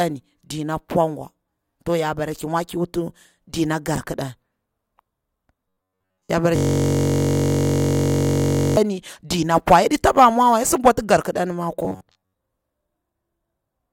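Speech, with two kinds of fault. From 5.69 to 6.32 s, just before "ya bara", and again from 11.80 to 12.33 s, just after "sidi bwati garkidan ma", the voice turns into a rigid metallic buzz at 93.8 Hz. This is robotic sound from repeated short buffers, likely caused by audio arriving too seldom, so that most of the signal is skipped and a roughly 10.7 ms fragment is replayed in its place. Unlike a hang, it still loosely tracks the speech. Between "ya bara" and "dina pwa yaɗi taba", from 6.56 to 8.77 s, a system hang loop repeats one 21.33 ms piece identically about a hundred times. That produces a steady 46.9 Hz buzz, which fits a 1024-sample ring buffer cycling while the driver froze. Nothing in the sound moves forward during this stretch.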